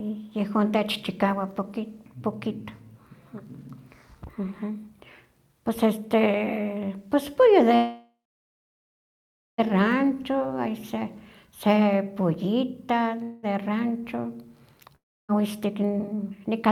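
At 7.75 s the audio stops advancing and the last sound is held as a buzzy tone that fades. By about 9.60 s the hold has lasted 1.83 s, roughly 1.44 s of it near-silent. This is a call audio freeze: packets were likely delayed and the jitter buffer emptied. Speech resumes exactly where it stopped, so nothing is lost, but the playout delay grows by 1.83 s. On a spectrogram the final harmonics smear into flat horizontal streaks that dim to a blank band. On the waveform a decaying envelope runs into a flat line.

From 10.15 to 10.48 s a jitter buffer slow-down stretches the sound to 89% speed. The pitch stays the same. About 41 ms of repeated pitch periods are inserted to rebuild the buffer's reserve, drawing the syllables out. The spectrogram shows the same harmonic spacing spread over more time. The waveform shows near-identical cycles repeated back to back.

A shorter call audio freeze runs from 13.23 to 13.45 s. 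It fills 0.2 s with a fading buzz that never reaches silence, then continues with nothing missing. The smeared harmonics trail off on the spectrogram without dropping to blank.

A long network dropout follows at 14.96 to 15.31 s. Here the receiver filled 0.33 s, fading to about 0.3 s of silence. When audio returns, 0.46 s has been skipped, and the delay shrinks by roughly 150 ms. The spectrogram shows smeared harmonics fading into a blank gap, and the waveform a flat stretch with an abrupt restart.

From 15.59 s to the end, a jitter buffer speed-up plays at 118% speed. Around 0.2 s of pitch periods are cut, so the speech sounds hurried while its pitch is unchanged. On the spectrogram the harmonic spacing holds but the syllables are compressed in time. The waveform shows short cycle-length pieces missing at the splices.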